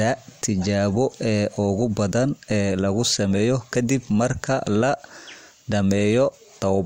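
No technical faults can be heard anywhere in the speech.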